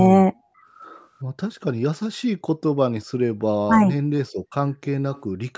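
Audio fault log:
0.48–0.63 s, background gated by the echo canceller: the room sound behind the speech drops sharply, by about 26 dB at its deepest, for roughly 150 ms, then comes back. This is the echo canceller clamping the microphone path while it judges the loudspeaker to be active, treating the ambience as possible echo and attenuating it until it releases.
3.66–3.96 s, speech suppressed in double talk: the talker's level sinks by roughly 15 dB across about 200 ms of this span, so the speech briefly sounds pushed back before recovering. The likely cause is both ends talking at once, with the echo canceller unable to separate the near talker from loudspeaker echo and turning everything down together.
5.12–5.21 s, echo leak: a faint, delayed copy of the speech appears, trailing the original by 442 ms and sitting around 30 dB below it. This is likely residual echo from a loudspeaker on one side of the call, where the microphone picked up the played-back audio and the canceller failed to remove all of it before sending it back.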